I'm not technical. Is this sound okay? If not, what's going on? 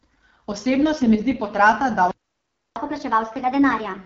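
No. The AMR wideband (HD Voice) codec affects the whole clip. This phone-call compression rebuilds speech from a simplified model of the voice. At the low setting used here it sounds rough and raspy, and nothing is present above about 7.5 kHz.

A playback stall runs from 2.11 to 2.76 seconds, cutting the speech off mid-flow for about 0.65 seconds. The likely cause is the player running out of incoming audio, or being briefly blocked, so it had nothing to play until it recovered.

Catch-up at higher speed follows, from 2.76 seconds to the end. The player races through the backlog it built up during the gap, playing 1.25 times faster. Because it simply speeds the audio up, the pitch rises too, by roughly four semitones.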